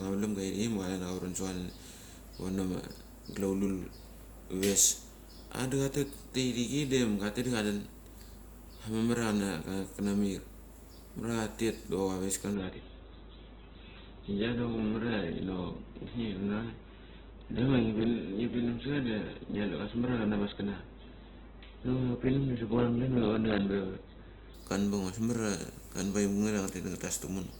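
From 12.54 s to 24.54 s, an adaptive stream at a lower bitrate takes over, likely after the connection slowed, and the sound fits a drop from about 64 to 8 kbit/s Opus. The speech abruptly loses everything above 4.1 kHz and turns dull, with no gap.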